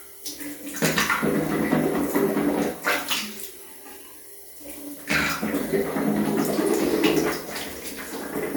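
Listening to this recording of sounds, nothing technical stood out as wrong at any point.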